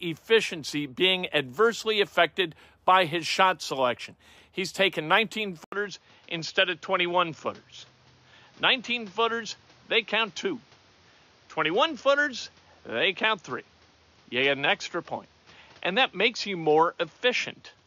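At 5.64 s the speech cuts out for 80 ms, then returns duller through to the end, with nothing above 6.9 kHz, a new noise floor roughly 35 dB down and little change in loudness: an input likely switched to a poorer device.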